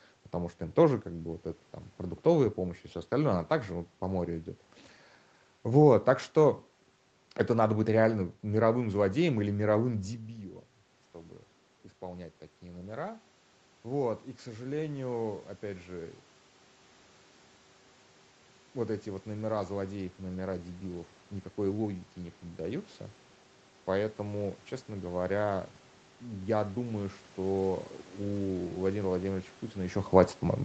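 Automatic gain rising begins at 11.12 s, after "злодеем или мировым дебилом", when the input drops about 12 dB. The gain climbs about 5 dB until 16.22 s, then about 3 dB from 18.74 to 22.94 s and from 24.18 to 30.05 s. Room noise swells along with the speech, which a talker moving would not cause.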